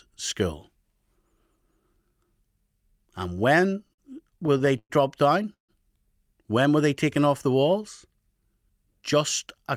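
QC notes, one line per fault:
3.61–4.92 s, repeated stalls (stutter): the sound drags and catches in 12 short hitches, the longest 111 ms, together filling 263 ms, about a fifth of the span. Packets kept arriving late, so the buffer repeatedly ran dry and the receiver stretched the last sound.
5.54–5.71 s, call audio freeze: a brief buzz of held sound fades into 120 ms of silence, 149 ms in all, then the audio resumes where it stopped with nothing lost. Likely cause: packets held up in transit emptied the jitter buffer, adding that delay.
8.39–9.57 s, jitter buffer speed-up: the audio runs slightly faster, at 104% speed with unchanged pitch. The buffer held surplus audio, so the receiver trimmed many tiny pitch-period slices, roughly a twentieth of a second overall, to catch up.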